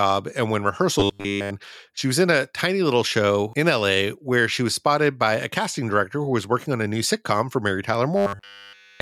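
From 1.00 to 1.52 s, between "and when" and "she was in a", and again from 8.16 s to the end, the speech becomes a rigid, metallic 100 Hz buzz, almost entirely replaced. This robotic sound likely comes from repeated short buffers, a 10 ms slice looped while fresh audio is skipped.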